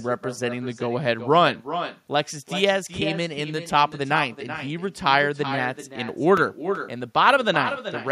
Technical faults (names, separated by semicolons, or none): echo with no canceller